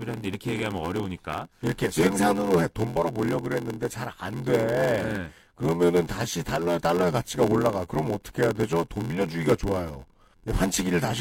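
From start to finish the speech carries a block size mismatch (padded). One stage delivers blocks shorter than the next stage reads, which fits a 512-sample read block, and the shortfall in each block is filled with silence. The result is a steady 86.1 Hz buzz, with the speech running at 0.861 times normal speed but close to its usual pitch. On a waveform, regular flat gaps chop the signal. A spectrogram shows evenly spaced vertical stripes and harmonics of 86.1 Hz.

At 2.19 s, compressed frames were skipped. Roughly 20 ms of coded audio never reached the output, either because it was missing or because the decoder rejected it as damaged, so the speech jumps ahead. On a spectrogram the harmonic pattern shifts abruptly at the join.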